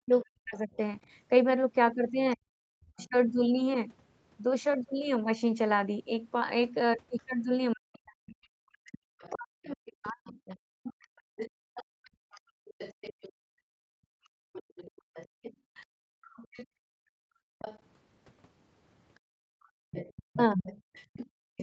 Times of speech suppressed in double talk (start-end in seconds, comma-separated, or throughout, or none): 0.03-3.15, 7.73-10.65, 20.31-20.64